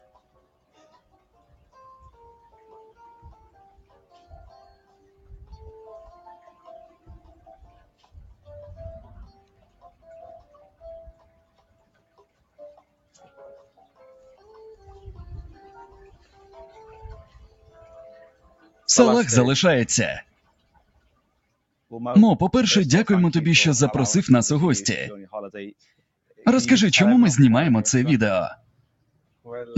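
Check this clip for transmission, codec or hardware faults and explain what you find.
The fault is processing, not transmission: a speech noise suppressor is acting on this audio.

Noise suppressor applied to music or sounds, throughout: the suppressor treats steady sound as noise. Its gain swings by roughly 15 dB, so sustained parts pump and thin.

Sound cut by the noise suppressor, at 0.0–5.54, 6.43–8.48, 9.28–14.48, 16.15–16.5, 17.24–17.78, 18.26–18.87, 20.23–21.4 and 28.57–29.46 s: held and fading sound sinks by about 9 to 14 dB. Sudden onsets come through.

The band stops at 8 kHz. That fits the call codec's normal bandwidth and is not a fault.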